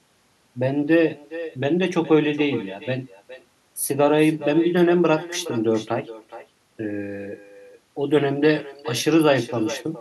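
Throughout, there is echo with no canceller: the far end's loudspeaker leaks into its microphone, so each phrase returns roughly 0.4 s later, about 15 dB quieter and thinner.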